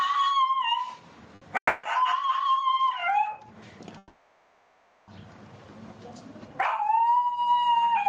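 Gain pumping runs through the whole clip: the gain swings by around 20 dB, pulled down on each loud sound. This is likely from excessive input gain driving a fast limiter. It is a continuous breathing, not a gate's abrupt cut-off.

At 1.35 to 1.43 s, a short stall from a late packet holds the last sound for about 60 ms, then resumes from the same point. The same happens briefly at 2.25 to 2.29 s, lasting about 20 ms. Nothing is lost and there is no silence, only a held sound.

At 1.57 to 1.85 s, a call audio freeze stretches the last sound into a fading fill. It ends in about 80 ms of silence before playback resumes where it stopped, likely because the jitter buffer ran dry. A longer freeze at 3.98 to 5.10 s inserts 1.1 s of decaying fill before the audio continues. Unlike the stalls, these are long enough to hear the fill fade away.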